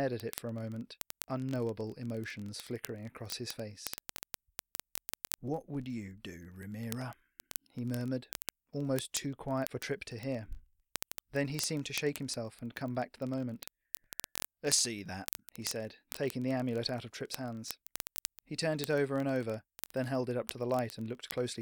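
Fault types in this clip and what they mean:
word clock ticks: the unlocked receiving clock runs about a tenth of a percent off, slipping one sample some fifty times a second, giving a buzzing rattle throughout.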